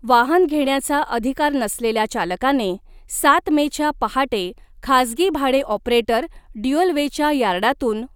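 Nothing technical stands out in this short speech recording, so there's no fault to point to anywhere along it.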